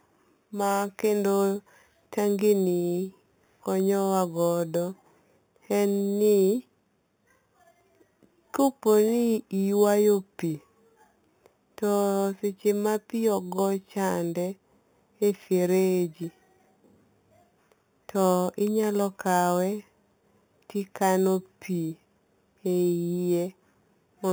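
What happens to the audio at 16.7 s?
At 16.7 s you're hearing imaging from sample-and-hold upsampling, which actually runs through the whole clip. Going from 8 kHz to 48 kHz by just repeating samples left mirrored copies of the speech between 4 and 8 kHz, about 20 dB down, as a metallic fizz that tracks the speech level.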